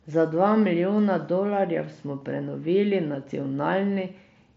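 No faults; the speech comes over a Bluetooth mSBC headset link, band-limited to about 8 kHz with the codec's light graininess on louder passages.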